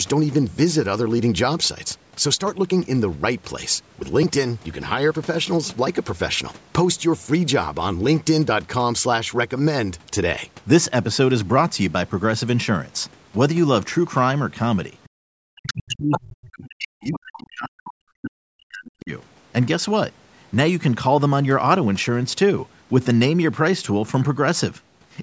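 Speech clip, band-limited to nothing above 8 kHz by the call's microphone processing. The other side's voice leaks through at 15.04–15.09, 15.67–16.2, 16.65–17.19, 17.88–17.92 and 18.86–18.91 s. A second talker appears, nearly as loud as the speech in the longer middle bursts and faint in the brief scraps around them, likely loudspeaker echo that the echo canceller failed to remove from the microphone. Speech is suppressed in double talk from 15.25 to 19.12 s. The main talker dips by as much as roughly 40 dB, most likely because the canceller could not tell the two apart and attenuated both.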